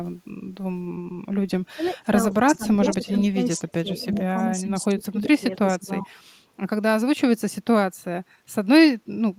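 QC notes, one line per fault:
1.75–3.88 s and 4.28–6.22 s, speech suppressed in double talk: the speech dips by up to about 25 dB, for roughly a second in each span. The likely cause is an echo canceller turning down its own talker along with the loudspeaker echo during overlapping talk.
1.85 s, 2.75–3.25 s and 4.03–4.43 s, echo leak: a copy of the speech returns 386 ms late. It sits about 30, 10 and 15 dB below the speech. The likely cause is a loudspeaker echo the loudspeaker side failed to cancel.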